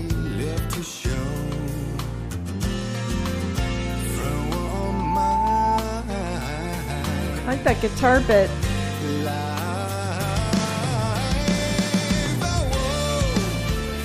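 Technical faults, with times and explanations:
4.72–5.81 s, loudspeaker feedback squeal: a steady 880 Hz tone swells over roughly 0.4 s to about 5 dB above the sound, since the mic-to-speaker loop gain topped one there.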